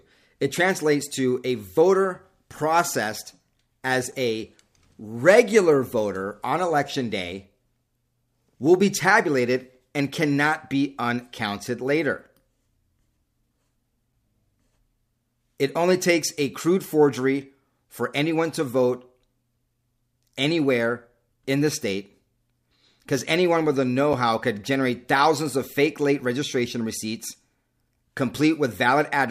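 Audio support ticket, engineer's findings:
Two short dropouts in the speech, about 6.5 ms each: 4.12 s, between "a voter processed as" and "a regular voter on", and 24.13 s, between "anyone with the know" and "how could generate thousands". Gap between chunks: silence inserted at joins, consistent with 10 s chunking.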